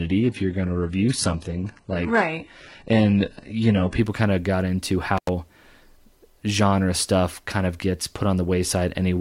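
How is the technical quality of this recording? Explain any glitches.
Two faults stand out in the speech: a low-quality opening and a brief dropout.

From 0.0 to 4.0 s, the adaptive stream starts at a low bitrate. The thin, artefact-laden sound, which suggests a low-rate HE-AAC stream, jumps to better quality with no gap, unlike a dropout.

At 5.17 s, an intermittent contact opens for about 90 ms. Crackle at both edges, not a clean digital silence, marks a loose connection rather than packet loss.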